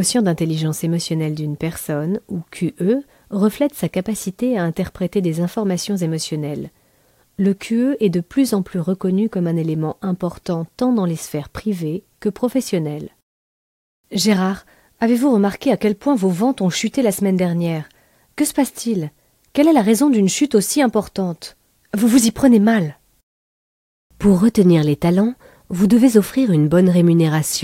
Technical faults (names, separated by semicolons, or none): none